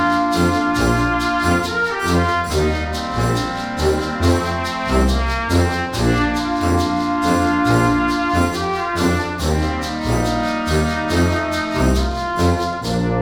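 Listening closely, nothing in the audio stood out as a technical problem at any point.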